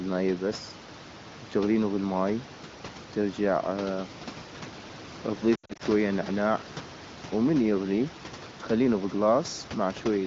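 From 5.55 to 5.82 s, lost AMR speech frames corrupted by radio errors fail their check, and the wideband decoder fills the gaps by repeating the last good pitch and vocal tract settings at falling gain. About 160 ms goes missing, scattered across roughly 240 ms, which fits several 20 ms frames. The sound warbles, fades during the longest gap of about 80 ms, then returns weak and rough for a moment above the room noise.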